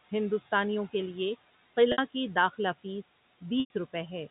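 Noise suppressor artifacts run through the whole of this speech recording: the suppressor pulls the steady room noise down by about 15 dB in each frame, so the background sinks between words and swells back under them. Packet loss with pitch repetition appears at 1.92 to 1.98 s, right after "ہندوستانیوں کے لیے" and before "کی داخلہ". A 60 ms gap, which fits about three lost 20 ms packets, is bridged by repeating the last pitch period, heard as a brief held buzz. The same fault returns at 3.6 to 3.7 s, where a longer 100 ms loss, consistent with around five packets, lets the repeated period fade toward silence before the speech cross-fades back in. Speech cut by the noise suppressor occurs at 3.02 to 3.13 s, just after "کی داخلہ". For roughly a tenth of a second the suppressor mistakes quiet speech for noise and turns it down by up to about 14 dB, so that stretch sounds swallowed and faint. 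The room noise, about 19 dB under the speech, and the band-limited G.711 A-law telephone sound belong to the recording and the line.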